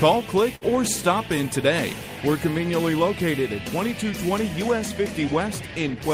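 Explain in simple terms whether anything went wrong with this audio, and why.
At about 0.55 to 0.64 s there is a burst of packet loss. A chunk of audio was lost or arrived too late, so the player stretched the last sound for roughly 60 ms while fading it, then jumped ahead. Unlike a plain dropout, the gap fills with a smeared tail instead of silence.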